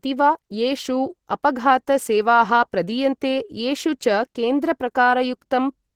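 From start to end, the speech carries plainly audible codec damage, likely Opus compression in its hybrid mode at a rate that fits about 16 kbps. The lower band, coded by the speech layer, sounds hoarse and muffled. The upper band is rebuilt from folded energy and noise, so the sound turns grainy and rough. On a spectrogram the high bands look smeared and noise-filled rather than holed, and energy reaches 22.9 kHz with nothing above.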